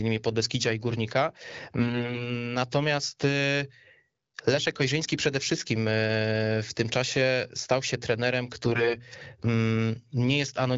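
Speech coded over AMR-WB (HD Voice) has AMR bit errors at 1.80–2.32 s and at 8.65–8.99 s, just after "czasie stał się trenerem". Flipped low-priority bits misplace excitation pulses, making the sound hoarse and gargly while pitch and level hold. On a spectrogram, harmonics smear into broadband noise.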